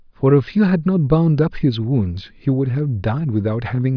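No technical faults can be heard anywhere in the speech recording, and the signal holds steady throughout.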